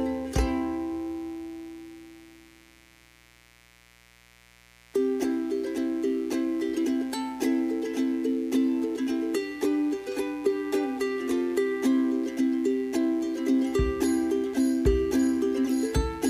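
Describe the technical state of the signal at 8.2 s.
At 8.2 s the signal carries mains buzz, and it is present for the whole clip rather than just at this moment. Sharp switching spikes from something like a dimmer or rectifier enter the path twice per cycle of the 60 Hz supply, producing a stack of 60 Hz harmonics that reaches into the kilohertz range. It sits roughly 30 dB below the wanted sound as a steady, raspy buzz. Unlike plain hum, which is a smooth low tone, this has a gritty, bright edge.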